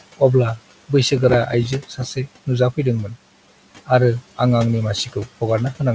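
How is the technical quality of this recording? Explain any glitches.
The recording has three audible faults: a noise suppressor working throughout, a burst of crackle early on, and one brief moment where speech is dimmed. The room noise sits about 19 dB below the speech, and nothing above 8 kHz survives, which fits a wideband call codec such as G.722.

Noise suppressor artifacts run through the whole clip. The suppressor pulls the steady background down by about 17 dB between phrases and lets it back up under speech. On a spectrogram, the noise floor appears as patchy, flickering specks that pump with the speech.

Processor overload crackle runs from 1.06 to 2.29 s. The processor repeatedly missed its deadlines on buffers only a few milliseconds long, dozens of times in a row, and each gap was filled with stale audio. The result is gritty tearing over the speech. A waveform shows many tiny hard-edged discontinuities, and a spectrogram shows thin vertical broadband streaks.

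Speech cut by the noise suppressor occurs from 1.88 to 1.99 s, inside the crackle. The suppressor mistook part of the speech for noise and turned it down by as much as about 9 dB, so that sound seems swallowed. The waveform envelope dips, and the spectrogram shows a faint gap in the speech energy.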